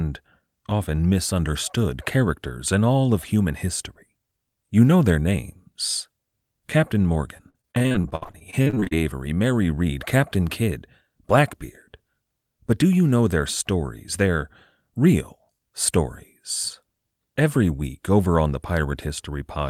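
From 7.37 to 8.97 s the speech suffers repeated packet loss, giving a robotic sound. Audio packets kept going missing or arriving too late, around twenty times in that stretch, with the longest hole about 60 ms. The receiver filled each hole by extending the last fragment it had, so about a third of the span is patched-in sound. The result is choppy, robotic speech with pieces dropping out in quick succession.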